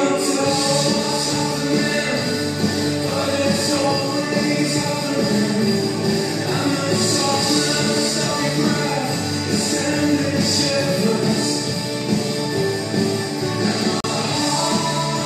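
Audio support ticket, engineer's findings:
Gap between stream segments at 14.00–14.04 s. Symptom: hard-edged silent hole of 37 ms, single occurrence. Probable component: segment packager or player timeline, at a segment join consistent with 6 s segments. Mechanism: adjacent segment timestamps leave a small gap and the player fills it with silence. Extra time inserted; no audio lost.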